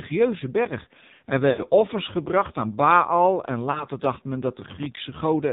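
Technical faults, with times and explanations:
Throughout: AMR narrowband mobile codec. The speech has been squeezed through AMR-NB at a very low rate, near 5.9 kbps, and the damage is heavy. Everything above 4 kHz is gone, because the codec samples at 8 kHz. So little bit budget is left for the pulses driving its vocal-tract model that the voice turns buzzy and synthetic. A spectrogram shows a hard ceiling at 4 kHz, with smeared, blocky harmonics below it.
1.50–1.63 s and 3.72–3.86 s: lost AMR speech frames. Frames failed their checks, and the decoder filled the gap by repeating the last good pitch and vocal-tract settings at falling gain. The first gap, about 80 ms just before "offers gebracht aan", fits four lost frames. It sounds like a short drawn-out warble that sags before the voice returns roughly. The second, just before "dacht men", fits a single lost frame and is only a brief dip. 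On a spectrogram, frozen, flattened harmonics fade out across each gap.
4.57–4.97 s: processor overload crackle. Just after "dacht men", the processor kept missing its deadlines, and each missed buffer came out as silence. The gaps are consistent with buffers of roughly 5 ms, and about twenty of them were dropped. Together they make a gritty, tearing crackle for about 0.4 s. The waveform shows many tiny hard-edged dropouts, and the spectrogram shows thin vertical broadband clicks at each edge.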